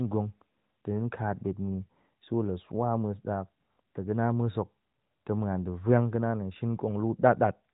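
Nothing here sounds technically wrong; it's just speech coming through steadily with no dropouts, glitches or other trouble to point at.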